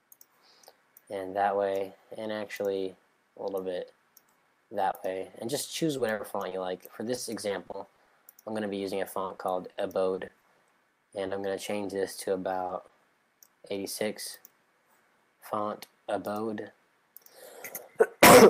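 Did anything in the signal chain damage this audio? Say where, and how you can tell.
Yes. Five brief smears or wobbles, each roughly 20 ms long, sit at 4.91, 11.27, 12.67, 12.87 and 13.67 s. The damage happened at the network stage, and these are short concealed packet loss. A packet failed to reach the decoder in time, so the receiver extended the preceding sound across the hole and cross-faded back into real audio. The 20 ms span of each fits a single lost 20 ms packet.

Three stretches turn choppy: 5.97 to 6.53 s, 7.15 to 8.09 s, and 9.25 to 10.61 s. This is repeated packet loss giving a robotic sound. Holes arrive in quick succession, with four, six and seven dropouts in the three stretches, each patched by extrapolation before the next one hits. The first stretch has the highest share of fill. About 21% of it is synthetic fill, and it contains a 60 ms hole. The later two are about 13% filled.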